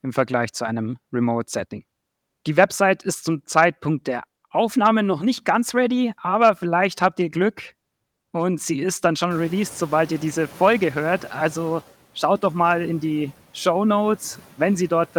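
From 9.3 to 11.82 s the noise suppressor is catching up after the room noise jumps. Its lagging estimate lets the noise through at first, then over 2.52 s pulls it down by about 7 dB. A spectrogram shows the broadband floor brightening, then gradually fading.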